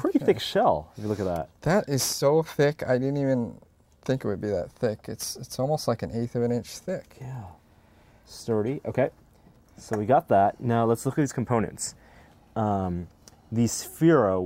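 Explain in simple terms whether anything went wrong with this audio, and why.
Nothing went wrong here: the signal stays steady and intact throughout, with no technical problems to be heard anywhere in the recording.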